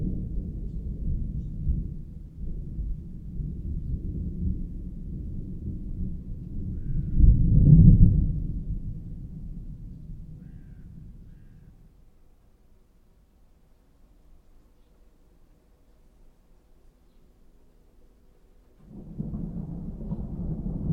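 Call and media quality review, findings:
No faults found across the clip; the signal path shows nothing for the review to flag.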